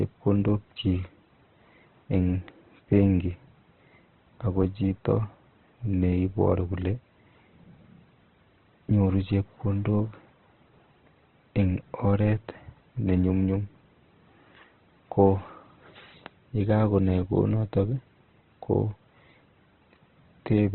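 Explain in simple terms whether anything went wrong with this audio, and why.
From start to finish the speech sounds dull and boxed-in, with nothing above about 4.1 kHz, and it has a rough, grainy texture. The likely cause is heavy Opus compression: squeezed into very little data, the encoder threw away the upper range and filled the gaps in what remained with approximations. A simple treble cut would sound muffled but clean; the grit marks a codec. Unlike MP3 damage, there is less watery swirling and more of a steady noisy roughness.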